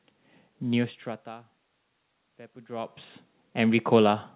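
A speech clip, and nothing is technically wrong with it.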